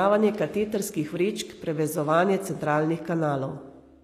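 From start to finish the speech carries plainly audible damage, most likely from HE-AAC compression at a rate consistent with about 24 kbps. The lower spectrum is coded directly, while the treble is rebuilt by spectral band replication, which copies lower bands upward under a coarse envelope. Unlike a plain low-pass codec, which sounds dull, this keeps the top end bright but synthetic, so s sounds turn gritty, metallic or lispy.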